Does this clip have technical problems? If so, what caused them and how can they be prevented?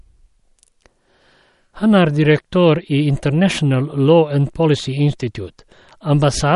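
Yes. Throughout the speech, the sound is watery and swirly, with smeared consonant attacks and nothing above 11.2 kHz, which likely points to MP3 compression at a low bitrate, around 48 kbps: starved of bits, the encoder cut the treble and let faint frequency detail flicker between frames. Encoding at a higher bitrate, or keeping an uncompressed master, prevents this.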